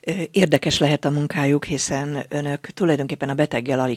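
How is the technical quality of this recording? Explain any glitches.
The speech opens with one glitch. From 0 to 0.92 s a filter restarted on every block, losing its memory so each block begins from silence. The transient at each block edge forms a regular 21.5 Hz buzz, which fits a 2048-sample block, and it swells and fades with the speech's level. Unlike buffer-underrun clicks, the ticks stay evenly spaced and leave no gaps in the sound.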